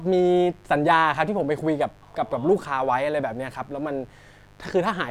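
A steady, raspy mains buzz sits under this speech from start to finish. It is built on 50 Hz, so the hum comes from a 50 Hz supply. Its harmonics climb well up the spectrum, which gives the tone its edge. The buzz sits roughly 30 dB below the speech. It is quiet but constant. It comes from sharp switching spikes twice per mains cycle, leaking in through a dimmer, a rectifier or a poorly shielded cable.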